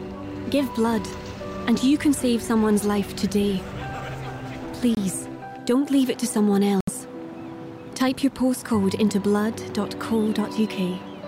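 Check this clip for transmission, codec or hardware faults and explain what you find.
Three faults are audible: two short muted gaps and one isolated click.

At 4.95 s the sound cuts abruptly to silence for about 38 ms, and at 6.81 s it does so again for about 90 ms, ending at 6.90 s. These are corrupt frames being muted. Bit errors damaged compressed frames, the decoder rejected them, and the player filled their slots with silence. The gap lengths fit two and three lost frames. The timeline stays intact, so nothing shifts afterward.

At 8.84 s a single sharp, dry click stands out, a thin vertical line in the spectrum with no audible loss of material. This is likely dropped samples: only a handful of samples vanish, under a tenth of a millisecond. The waveform jumps straight from one value to a later one, and that discontinuity produces the tick.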